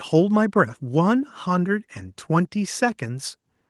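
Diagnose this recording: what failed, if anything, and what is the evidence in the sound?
Nothing failed; the speech carries no audible faults.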